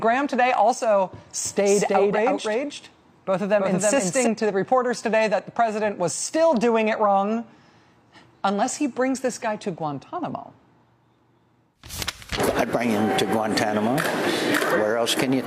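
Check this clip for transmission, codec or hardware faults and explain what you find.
One fault is present: a doubled audio track from 1.45 s to 4.27 s. A full-band copy trails by around 300 ms at roughly equal level, likely from the sound being captured again through a slower path. It is heard as a flat, undecaying slapback. A spectrogram shows every onset repeated about 0.3 s later, starting and stopping abruptly.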